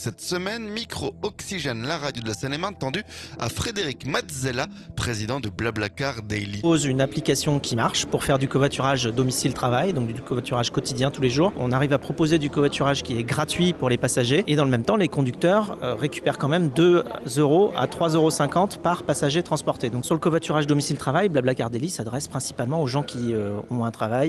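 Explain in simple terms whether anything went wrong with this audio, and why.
Skip ahead at 6.63 to 6.65 s: about a second of audio was thrown away while later sound was already queued, so playback jumps straight forward with no gap.

Jitter buffer speed-up from 8.31 to 11.28 s: the receiver had built up too much delay, so it kept snipping tiny pieces out, removing about a fifth of a second. The sound plays 6% faster at unchanged pitch and feels slightly rushed.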